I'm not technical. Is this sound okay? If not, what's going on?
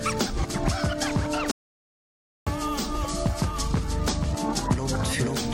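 No. From 1.51 to 2.47 seconds there's an audio dropout to silence: nearly a full second of the sound simply vanishes. Unlike a natural pause, which keeps faint background noise, this gap is completely dead, most likely because the input briefly disconnected.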